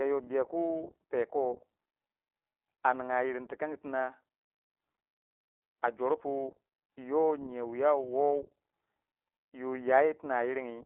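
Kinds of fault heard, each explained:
iLBC codec: a narrowband speech codec that codes each 20 ms frame independently. The speech is confined to roughly 300 Hz to 3.4 kHz with nothing above 3.8 kHz, sounding muffled, and has a plainly audible rough, synthetic texture, which fits the 15.2 kbps mode.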